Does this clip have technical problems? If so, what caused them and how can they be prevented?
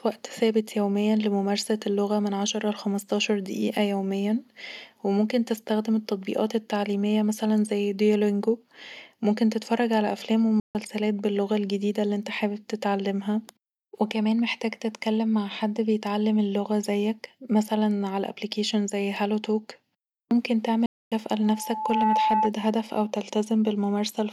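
Yes. There are two playback stalls, most likely caused by the player running short of buffered data or having its audio thread blocked, so nothing reached the output until it caught up. The speech cuts out mid-flow at 10.60 to 10.75 s (about 148 ms), between "ممكن تتفرج علي افلام" and "باللغة الجديدة اللي انت", and again at 20.86 to 21.12 s (about 256 ms), then resumes. A larger playback buffer and a higher priority for the audio thread prevent this.

A loudspeaker feedback squeal follows from 21.41 to 22.52 s, ending just before "هدف او". A microphone was picking up the loudspeaker it fed, and at 866 Hz the loop's gain rose above one, so that frequency reinforced itself on each pass. A single tone swells over roughly 0.7 s until it sits about 5 dB above the speech. Keeping microphones out of the speakers' coverage, lowering gain, or notching 866 Hz prevents this.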